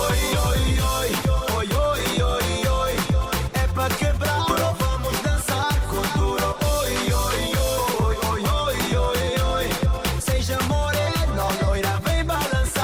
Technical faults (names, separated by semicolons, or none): skip ahead; jitter buffer speed-up